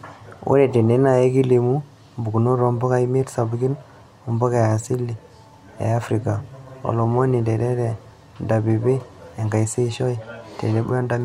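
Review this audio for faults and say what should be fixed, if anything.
No faults; nothing to fix.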